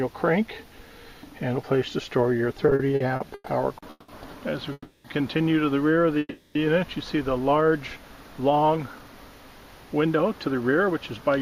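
From 2.57 to 3.48 s the audio stalls repeatedly. This is a stutter. Eight short gaps break the sound, the longest 120 ms. In each one the receiver carries the last sound forward until fresh audio arrives. Together they fill 290 ms, about a third of that stretch. Nothing is lost. The sound drags and hiccups because packets kept arriving later than they were played.

Three call audio freezes follow: 3.90 to 4.10 s, 4.72 to 5.06 s, and 6.19 to 6.57 s. Each time the sound hangs as a fading buzz or hiss, then drops to silence for 20 to 30 ms. The fills last 180, 320 and 360 ms. The audio then resumes exactly where it stopped. Those gaps are inserted, not missing audio, and the delay grows by each fill. Packets held up in transit are the likely cause.

From 9.94 to 11.38 s a jitter buffer speed-up occurs. The receiver had built up extra buffered audio. To shrink that delay it cut many tiny slices of one or a few pitch periods. 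About a tenth of a second disappears this way. The sound runs at roughly 106% speed with unchanged pitch, so it feels slightly hurried.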